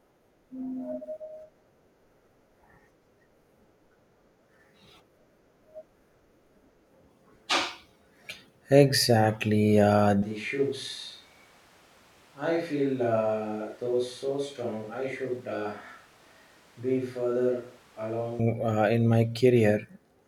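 From 10.23 s to 18.39 s the close microphone's signal likely dropped out, forcing a switch to a distant microphone. Starting at "uh in my", the speech turns roomy and hollow, thinner in the bass and about 10 dB quieter, with background noise roughly 30 dB down, then snaps back.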